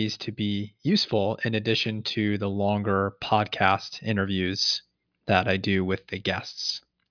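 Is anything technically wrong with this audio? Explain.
No, there are no faults.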